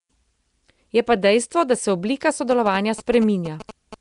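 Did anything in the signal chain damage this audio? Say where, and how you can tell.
Yes. Nellymoser compression runs through the whole clip and sits at the codec stage. The speech has a rough, hissy halo and a smeared, underwater quality, with nothing above 10.6 kHz. This likely comes from Nellymoser Asao at a rate near 44 kbps, whose fixed bit budget leaves weak bands empty and fills them with noise.

GSM signalling bursts run from 2.51 to 3.95 s and enter at the analogue wiring. They are heard as a galloping dit-dit-dit of short 216.7 Hz buzzes, roughly 15 dB below the speech. A nearby 2G phone's radio bursts are being rectified by the audio circuit.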